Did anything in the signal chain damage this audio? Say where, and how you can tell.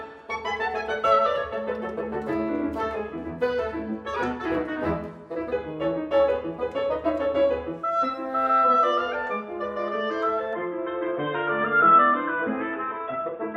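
Yes. At the capture stage the input likely switched to a poorer device at 10.53 s. From there to the end nothing passes above 3.8 kHz, the level shifts by about 5 dB and a faint new noise floor appears. The sound turns dull and boxy with no gap.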